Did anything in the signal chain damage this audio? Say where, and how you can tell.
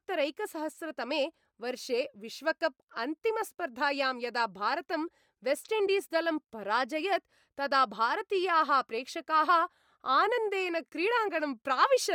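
Yes. Bluetooth LC3 compression throughout, at the codec stage: the speech has a grainy, breathy top, likely from noise-filled upper bands, fitting roughly 48 kbps in 10 ms frames.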